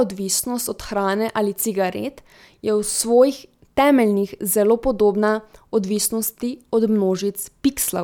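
No technical faults are audible anywhere in the recording.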